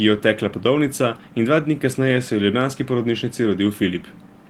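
No technical faults turn up anywhere in this speech, so there is nothing to describe in time order.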